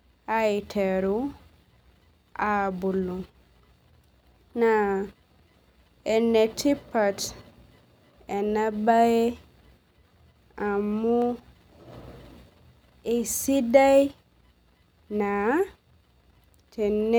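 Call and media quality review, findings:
Dropped samples at 11.22 s: single sharp click in the speech. A fraction of a millisecond likely lost from the stream, so the waveform steps abruptly to a later value. Spectrogram shows one thin vertical line spanning all frequencies; no audible gap.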